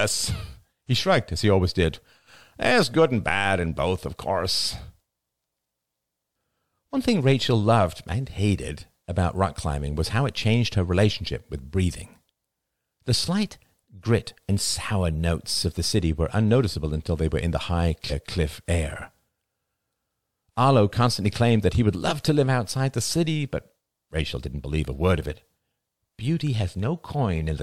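Compressed frames skipped at 18.1 s, after "were in the high", and at 22.1 s, after "claimed that he would": whole compressed frames went unplayed, so the speech jumps ahead by roughly a fifth of a second, then about 0.15 s, with frames of 46.4 ms.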